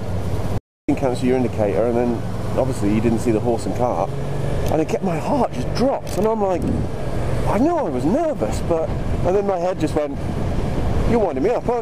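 From 0.58 to 0.89 s, an audio dropout to silence, likely a lost input, blanks 305 ms: flat-line waveform, empty spectrogram, no room tone.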